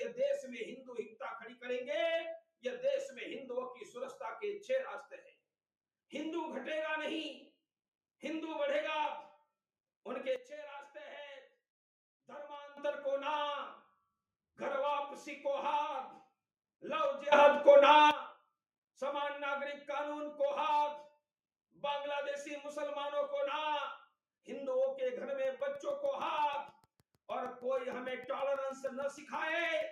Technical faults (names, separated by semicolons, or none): sound cut by the noise suppressor; sudden gain jump; train of clicks